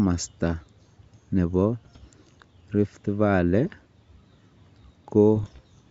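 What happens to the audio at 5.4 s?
Bit errors on an ADPCM link, under half a percent of bits, upset the G.722 decoder's step size and predictor from 5.35 to 5.60 s, leaving pops and rough bursts with brief level jumps.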